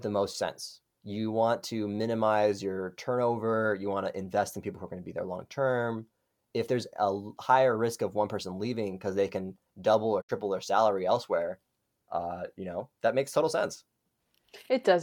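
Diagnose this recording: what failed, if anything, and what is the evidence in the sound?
The digital broadcast reception failed briefly: the receiver lost corrupt frames and muted, a digital broadcast dropout. The speech fades out over about 20 ms at 10.20 s and returns at 10.31 s. The 64 ms of missing audio fits two lost frames, and it is gone for good.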